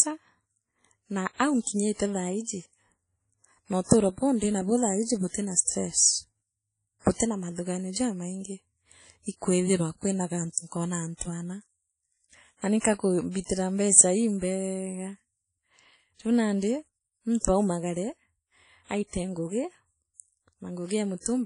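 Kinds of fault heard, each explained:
WMA compression: The speech has a plainly audible ringing, washy smear, with hiss that swells and fades along with the talking, and nothing above 10.1 kHz. That's likely a low-bitrate transform codec like WMA, fitting around 32 kbps, with long blocks spreading the quantisation noise.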